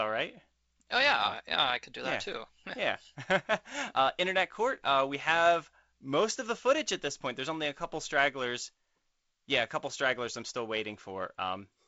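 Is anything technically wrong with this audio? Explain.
No, nothing is technically wrong with this audio. The speech carries the sound of G.722 wideband telephone coding, with nothing above about 7.7 kHz and a light graininess that fits the codec's 48 kbit/s mode.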